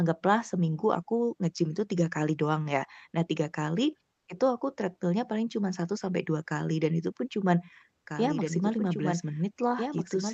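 At 4.13 s, comfort noise in place of the background: the sender has most likely switched to discontinuous transmission, as Opus does when its voice detector finds a pause, and the receiver fills the gap with synthetic noise. For about 140 ms, until 4.27 s, the real background, which sits roughly 52 dB below the loudest sound, gives way to a flat, textureless hiss about 2 dB quieter. It is heard as a brief smoothing and dip in the room tone rather than a dropout.

From 8.07 s to the end there is a doubled audio track. A second, full-band copy of the same audio, likely from a slower capture path or a misaligned edit, is mixed in about a second and a half behind the original and around 5 dB quieter. It enters abruptly, with no decay or room colour, so earlier material plays again under the current sound.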